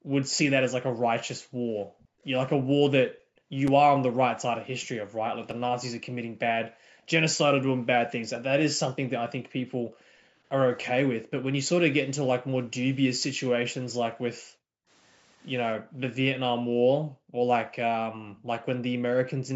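Right from the start, and again from 0.8 to 11.47 s, 12.02 to 14.89 s and 15.77 to 19.55 s, you get background gated by the echo canceller. It clamps the mic down by as much as about 40 dB while the far end plays, so the room tone keeps dipping out, for roughly 7 s of the long stretch. At 2.0 s and again at 18.37 s there's a faint echo leak: a ghost of the speech about 274 ms late, sitting about 35 dB down, most likely residue the canceller didn't fully scrub before sending it back. Then two blocks of digital silence hit, at 3.68 s (5.3 ms) and 5.51 s (2.7 ms). The output briefly cuts out with no fade, so each one lands as a tiny tick. The sizes fit buffers that weren't filled in time.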